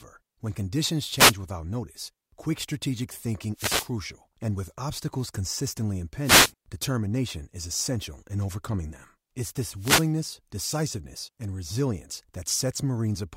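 Four wireless microphone noise hits break into the speech, at 1.15 to 1.35 s, 3.54 to 3.91 s, 6.23 to 6.52 s and 9.76 to 10.12 s. In each one the FM radio signal fades, and receiver noise swells into a brief static swish. On a spectrogram they show as broadband hiss bursts.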